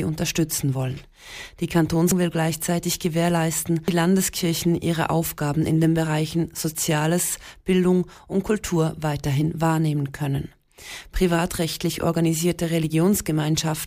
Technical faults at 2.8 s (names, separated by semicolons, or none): none